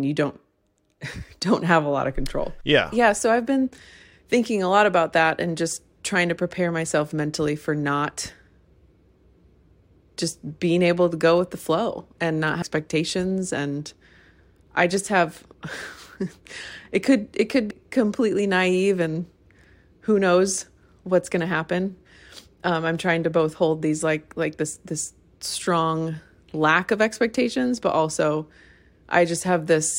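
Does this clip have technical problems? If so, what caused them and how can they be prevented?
Yes: damaged data in a compressed stream gives brief blips at 12.61 s, just after "the flow and not", and 17.70 s, between "it could it could" and "completely naive and". Corrupted bytes make the decoder misread a frame and hunt for sync, which shows as a thin broadband vertical streak on a spectrogram and a sharp glitch in the waveform. Checksummed transfers and verified copies prevent it.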